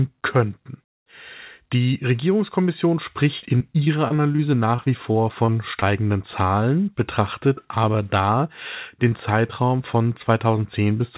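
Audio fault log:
3.38–4.40 s and 4.76–5.84 s, repeated packet loss (robotic sound): lost packets, gaps up to 38 ms, patched by repeating prior sound, leave choppy speech.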